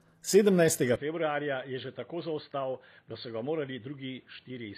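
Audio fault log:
Throughout: HE-AAC compression. The treble has a gritty, metallic quality and the s sounds come out lispy, likely from spectral band replication. Copied-up high bands don't match the true harmonics. On a spectrogram the upper bands look smeared and blocky, with nothing above 15 kHz, consistent with about 24 kbps.
0.96 to 4.78 s: input switched to a poorer device. With no gap, the sound turns dull and boxy, with nothing above 4.5 kHz, about 10 dB quieter, and a new noise floor roughly 35 dB down. This is likely a change to a narrower-band microphone. The waveform steps down and the spectrogram's top abruptly empties.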